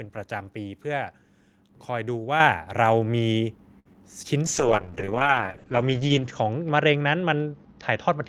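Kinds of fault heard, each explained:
Microphone volume stepped up: at about 2.4 s the call software judged the input too quiet and raised the microphone's gain in a single step, so speech and background both jump by about 7 dB together and stay at the louder level.
Short stall from a late packet: at 3.79 to 3.87 s a packet arrived late and the jitter buffer emptied, so the receiver held the last sound for 60 ms until it came, then resumed from the same point, leaving a stretched moment with a slight buzz or dip.
Short concealed packet loss: at about 3.93 to 3.96 s around 20 ms of speech never reached the decoder in time. The receiver briefly extended the preceding sound and blended back in, giving a quick smear where a small slice of speech is missing.
Call bitrate drop: from about 4.47 s to the end the bandwidth estimate fell and the encoder went from 32 to 8 kbps, its lowest rate held for about 1.8 s. 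Coding turns coarser, and the upper limit drops from 20 kHz to 8 kHz, so the speech sounds rough and muffled.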